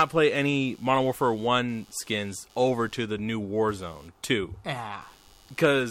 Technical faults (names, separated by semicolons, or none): computer activity noise